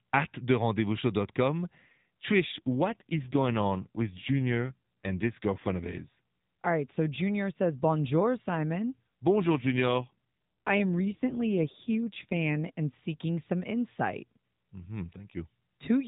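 From 2.32 to 6.08 s and again from 9.36 to 12.67 s, just before "and seeking some insight", an AMR rate drop makes the speech buzzier and more synthetic, which fits a fall from 12.2 to 5.9 kbps. Unlike packet loss, the narrow band holds and nothing drops out.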